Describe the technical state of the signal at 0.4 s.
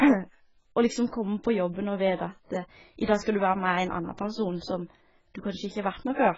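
At 0.4 s the speech carries AAC compression, present across the whole clip. Nothing sounds above about 7.6 kHz, so it is dull. Heavy smearing and a warbling, fizzy edge on sibilants likely come from a very low-bitrate AAC-LC encode starving its spectral bands.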